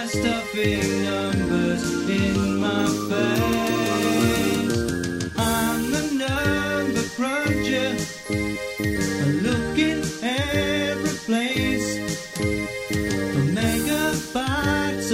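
No technical faults are audible.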